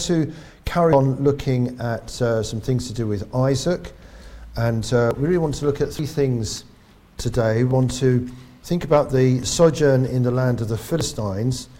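At 0.93 s there's a sudden jump in the sound, and the same thing recurs at 5.11, 5.99, 7.71, 9.43 and 11.01 s. Nothing goes silent; the audio just skips forward and the two sides butt together. That's most likely a dropped buffer (overrun), where samples got overwritten before being read. The jumps vary: around a tenth of a second at 0.93 and 7.71 s, about half that at 5.11, 9.43 and 11.01 s, and longer still at 5.99 s.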